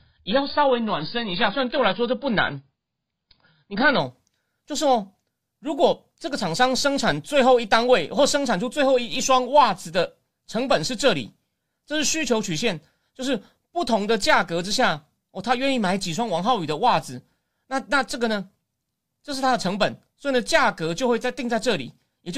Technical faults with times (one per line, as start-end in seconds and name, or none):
0.00-4.00 adaptive stream starting at a low bitrate